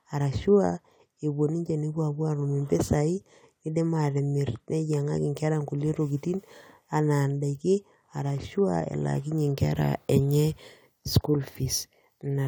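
No technical faults are audible anywhere in this speech.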